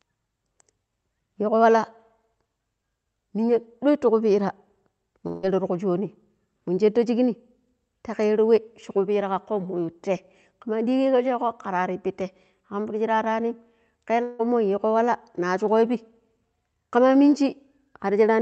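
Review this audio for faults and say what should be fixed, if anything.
At 5.27 to 5.45 s and 14.23 to 14.41 s, the speech breaks off, likely from a long network dropout. About 160 ms is lost each time. The receiver fills the gap with a fading, buzzy continuation, then speech resumes without the lost part. Forward error correction, a deeper jitter buffer or a steadier network link would prevent it.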